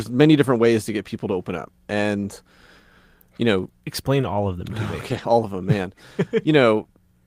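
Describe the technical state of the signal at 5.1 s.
From about 5.09 to 5.19 s the speech turns rougher and noisier, though it never drops out. This is a lost packet rebuilt from error correction: the decoder played low-bitrate copies carried in following packets, which fits roughly three lost packets.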